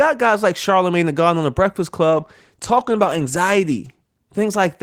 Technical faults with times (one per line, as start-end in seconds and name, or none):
2.14-4.82 call bitrate drop